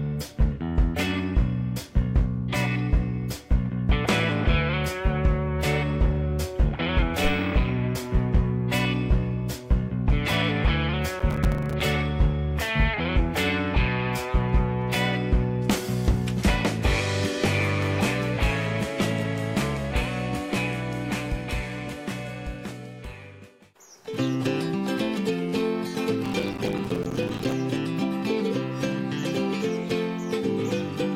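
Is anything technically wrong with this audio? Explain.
Yes. Processor overload crackle occurs from 11.20 to 11.81 s and from 26.26 to 27.52 s. The processor repeatedly misses its deadlines for buffers of around 5 ms, and each miss drops in a hard-edged gap of silence. Some twenty gaps in the first stretch and about fifty in the second form a gritty crackle over the audio.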